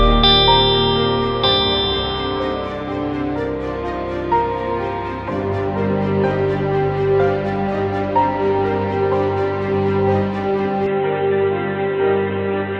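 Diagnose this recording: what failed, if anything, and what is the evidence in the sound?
From 10.86 s to the end, the sound abruptly turns dull and boxy, with nothing above 4 kHz. There is no gap at the transition and the level stays about the same, but a faint new background noise appears, well below the signal. This points to the input stage, most likely an input switched to a poorer device, such as another microphone or a headset's narrowband call profile, which carries its own band limit and noise floor.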